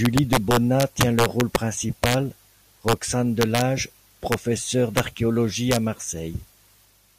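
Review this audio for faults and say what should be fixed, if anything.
Integer overflow cracks through this speech at 0.05–1.56 s, 2.04–2.14 s, 2.88–2.93 s, 3.41–3.61 s, 4.32 s, 4.97–5.00 s and 5.71–5.76 s. Peaks go past the integer limit. The first stretch overshoots by about 12 dB, and the later ones by about 1 to 3 dB. The samples are not held at the limit. They wrap to the opposite sign instead. Each overshoot jumps across the full range, so it is heard as a violent crack, much harsher than clipping. To prevent it, reduce the gain and use saturating arithmetic or a limiter before the signal is stored as integers.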